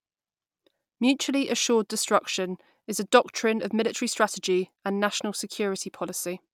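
No technical faults can be heard anywhere in the recording. Nothing in the audio calls for a timestamp or an explanation.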